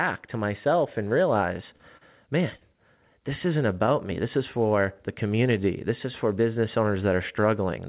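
Short concealed packet loss hits at 1.76, 1.97 and 2.58 s, after "to myself and realize" and before "this isn't". Each 30 ms gap is patched, leaving brief smears.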